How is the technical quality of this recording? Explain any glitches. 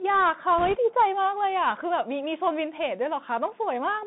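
The recording has limited technical quality: the whole clip has the sound of a Bluetooth headset link, and a short burst of corruption is audible near the start.

The Bluetooth CVSD headset codec colours the entire clip. CVSD sends a single up-or-down bit per sample and adapts its step size, and its output here fits a 64 kbps stream. The audible band runs from about 150 Hz to 3.7 kHz, so the speech sounds thin and muffled. Sibilants turn scratchy, and a granular hiss sits beneath the speech. Unlike a typical narrowband frame-based codec, the grit follows the loudness of the sound.

Bit errors on the Bluetooth voice link occur from 0.58 to 0.76 s. Flipped bits at a rate of a few percent each nudge the step only slightly and fade quickly. The result is a brief rushing crackle rather than loud clicks or the dropouts of packet loss.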